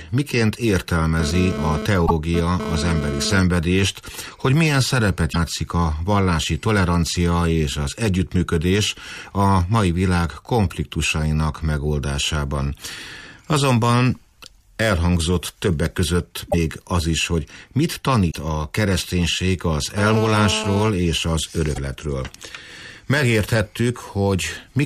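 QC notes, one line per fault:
1.20–3.40 s and 19.98–20.88 s, GSM phone buzz: a raspy 217 Hz buzz with many harmonics, about 6 dB below the sound. It is rectified radio bursts. It comes and goes in the first stretch, like a data transfer, and holds steady in the second, like a call.
2.05–2.11 s, 5.32–5.36 s, 16.50–16.54 s, 18.30–18.35 s, 21.75–21.78 s, broken MP3 bit reservoir: short glitches where the sound jumps ahead. Each spans one or two 26.1 ms frames, likely decoded with borrowed bits from the wrong frame after a cut.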